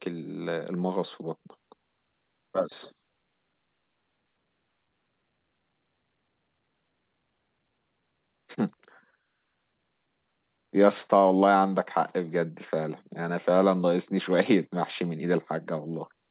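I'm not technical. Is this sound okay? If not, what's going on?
Yes, no faults here.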